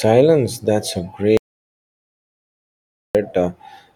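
At 1.37 s the input feed was likely lost, through a disconnect or a stray mute, while the recorder kept writing silence. The result is an audio dropout to silence: the speech cuts off abruptly, leaving dead silence with no room tone until it resumes at 3.15 s, about 1.78 s missing.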